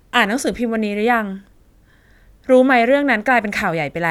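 No faults are audible in this speech recording at any point.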